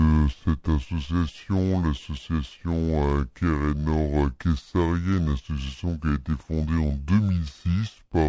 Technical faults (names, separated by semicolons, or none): wrong sample rate